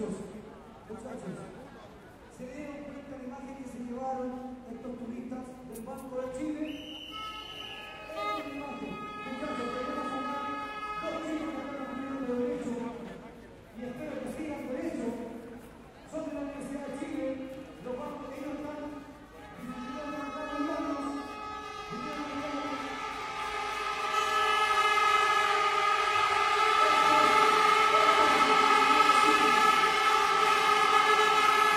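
No technical faults can be heard.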